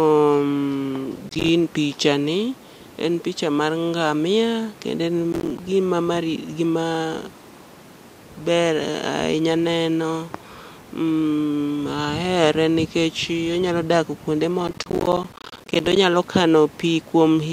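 Processor overload crackle breaks into the speech at 1.29–1.49 s, at 5.32–5.58 s just before "gima mari", and at 14.68–15.96 s after "onyalo dak kuonde". Runs of missed buffer deadlines, consistent with buffers of roughly 10 ms, drop out to silence with hard edges, heard as gritty crackling tears. The final burst is the longest.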